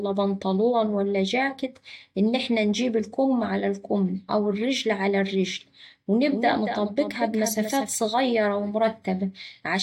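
Speech, with a doubled audio track from 6.31 s to 7.95 s: a second full-band copy sits roughly 200 ms behind, around 10 dB quieter, with no decay or room colour, starting and stopping abruptly. The likely cause is the signal being captured again through a slower path.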